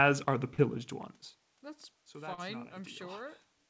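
Speech with short concealed packet loss at 0.54 to 0.60 s and 2.34 to 2.40 s. About 40 ms went missing each time and was patched by extending the preceding sound, leaving a brief smear or wobble rather than the hard silence of a true dropout.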